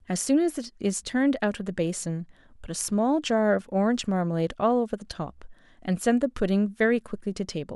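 Nothing in the speech stood out as a technical fault on listening.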